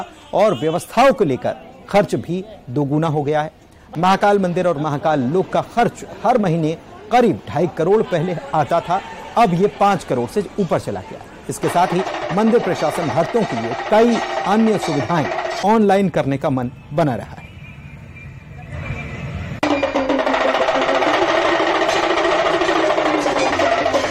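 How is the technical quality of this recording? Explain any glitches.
The recording is marred by mild hard clipping running through its full length.

Hard clipping, present throughout: the loudest peaks are pushed about 2 dB beyond what the signal path can carry, so their tops are sliced flat. Only around one percent of the audio goes over, but each flattened peak adds harmonics high in the spectrum. The result is a brief crackle or gritty edge on the loudest moments rather than a continuous fuzz.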